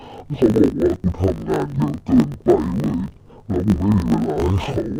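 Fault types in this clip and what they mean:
Interleaved audio read as planar: each 20 ms block holds alternating left and right samples, but the first half is played as the left channel and the second half as the right. Each half is stretched over the full block, so the speech drops by an octave (-12 semitones) while its overall pace stays the same. The result sounds dull and robotic, with a buzz at the 50 Hz block rate present throughout the clip.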